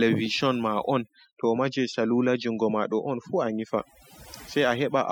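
A speech recording with overdone noise removal running for its full length. The noise reducer was pushed too hard: any frequency band whose level sits close to its noise estimate is pulled far down or shut off, and the softer parts of the voice fall below that threshold along with the noise. The result is a lowered background that breaks up into twinkling, warbling specks.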